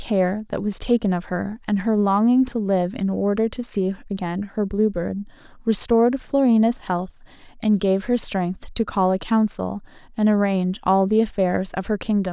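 No technical faults are audible in this speech recording.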